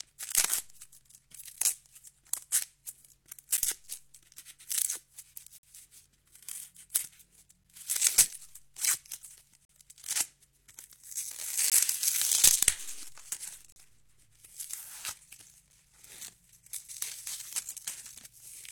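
Silent holes with hard edges break the sound at 1.56, 3.57, 5.58 to 5.63, 7.64, 9.65 to 9.69, 11.70, 13.72 to 13.76 and 15.72 s. These are gaps between stream segments: the timing of consecutive 2-second segments leaves a space, and playback fills it with silence lasting from about 5 to 47 ms. Unlike a dropout, nothing is lost; the sound resumes exactly where it stopped. The steady two-second spacing also gives it away.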